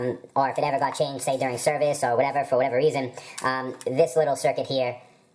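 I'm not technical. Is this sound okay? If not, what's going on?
No. From start to finish, everything plays too fast and too high, about 1.38 times normal speed and roughly five and a half semitones up, like a tape run too quickly. This is a wrong sample rate fault: the audio is being played back at a faster rate than it was made at, with nothing to adjust for the difference. The amount of speed-up fits audio made at 16 kHz being played at 22 kHz.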